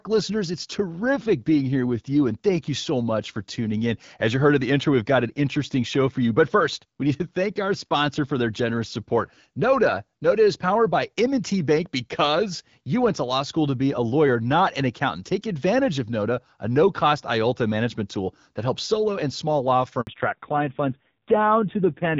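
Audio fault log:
20.01–20.07 s, handover gap: the call switched networks and no speech frames arrived for 60 ms, just after "solo and small law". The voice dies away into silence until the new link starts, so whatever was said then is lost.
20.07 s to the end, fallback to narrowband: after the handover, the call dropped from HD Voice to an older narrowband codec. Everything above 4 kHz disappears, leaving the sound duller and rougher, which points to a low narrowband rate near 5.9 kbit/s.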